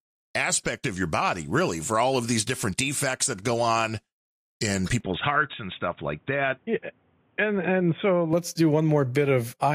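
Input switched to a poorer device, from 5.00 to 8.33 s, right after "that go on in": the speech suddenly loses everything above 3.8 kHz and turns dull and boxy, with a faint new background noise, likely from the recording shifting to a narrower-band microphone before switching back.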